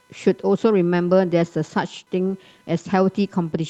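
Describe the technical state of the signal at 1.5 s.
At 1.5 s the speech carries computer activity noise, present throughout the clip rather than only at this moment. Processor, graphics or mouse load shifts the audio circuit's shared ground, leaving a faint buzzing chirp that pulses at roughly 500 Hz, about 40 dB below the speech. Unlike mains hum, it tracks the computer's activity, not a fixed 50 or 60 Hz tone, and it ignores the speech entirely. The call codec also limits the bandwidth to near 12 kHz.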